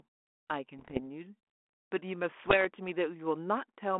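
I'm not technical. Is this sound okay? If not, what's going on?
No. Twice the digital link carrying this speech corrupted some of its bits, a fault called bit errors on an ADPCM link. This kind of link sends only the change from a running prediction, so a wrong bit also throws off the decoder for a short while afterwards. You hear this as pops and rough, crackly bursts with quick jumps in loudness, from 0.78 to 1.00 seconds and again from 2.45 to 2.65 seconds.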